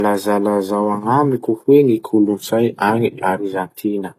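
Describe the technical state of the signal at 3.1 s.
At 3.1 s the speech is inside a drift correction step that runs from 2.04 to 3.38 s. Playback is about 5.3% slow, and the pitch sits roughly 94 cents low, close to a full semitone. Speed and pitch drop together and stay down until 3.38 s, where they snap back. The likely cause is clock-matching software changing the playback rate in one jump to rebalance its buffer.

Under this, the whole clip shows low-bitrate audio saved at a high bitrate. Nothing is present above 14.9 kHz. The artefacts of the compressed source come through unchanged. This is likely a very low-bitrate encode, pointing to something like HE-AAC at 24 kbit/s, later re-saved as MP3 at a generous rate such as 256 kbit/s. The second pass cannot bring back what the first removed.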